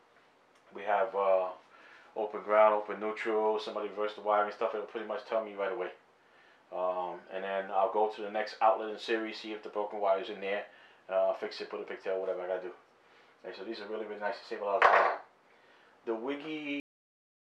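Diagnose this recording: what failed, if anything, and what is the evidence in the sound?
The failure is a cut-off end, at the buffer or storage stage. At 16.8 s the sound stops abruptly mid-event, with no decay or tail, and the final 0.64 s is digital silence. The final buffers of audio were never written to the file, or never reached playback, so whatever was sounding is truncated at a buffer boundary instead of ending naturally.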